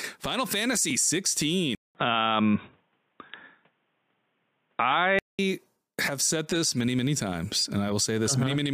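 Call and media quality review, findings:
Single tick at 0.90 s, a 1.45 ms block of digital silence. Hard cut to silence and back with no fade, which fits an output buffer of roughly 64 samples not filled in time.

Dull, boxy speech from 1.75 s to 5.39 s, nothing above 3.8 kHz, 200 ms silence at the switch, faint new background noise, level unchanged. Likely the input switched to a poorer device, such as a headset call profile, then back.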